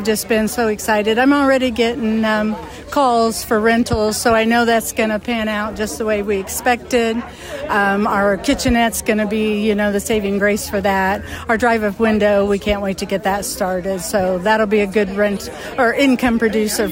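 No technical faults are audible.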